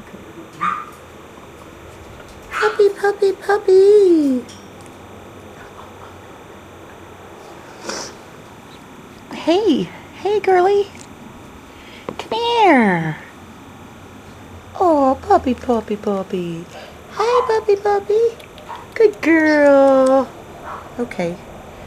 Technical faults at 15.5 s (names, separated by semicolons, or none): timecode bleed